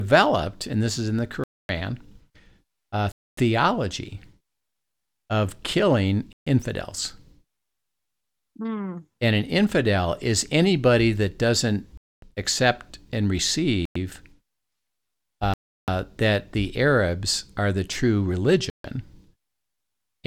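Speech drops to dead silence seven times, at 1.44, 3.12, 6.33 (after "of killing"), 11.97, 13.85 (after "that doesn't accept and"), 15.54 (before "that the") and 18.70 s, for 0.1 to 0.34 s each before resuming. This is a Bluetooth stall, likely interference holding up packets until the headphone buffer ran dry.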